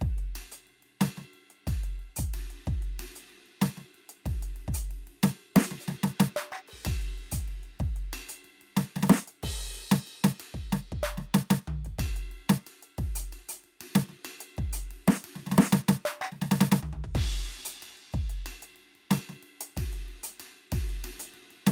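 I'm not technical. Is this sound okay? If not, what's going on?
Yes, this music sounds fine, with nothing wrong to hear.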